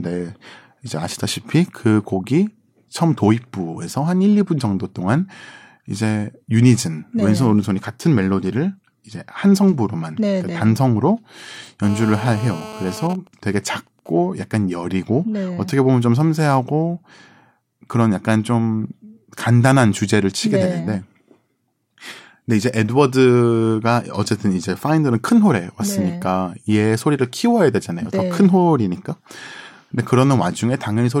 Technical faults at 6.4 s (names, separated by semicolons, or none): none